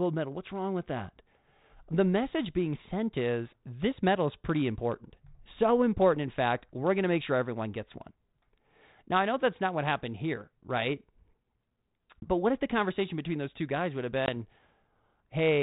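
At 12.21 to 12.28 s and 14.26 to 14.29 s, packet loss on an ADPCM call cuts about 20 ms, roughly one packet. Each hole is hard-edged silence. The decoder's predictor then falls out of step with the sender's, giving brief distortion.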